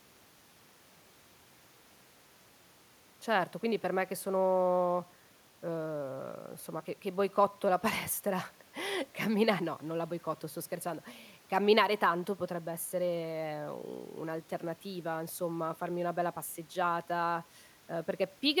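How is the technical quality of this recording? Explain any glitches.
No audible glitches or faults.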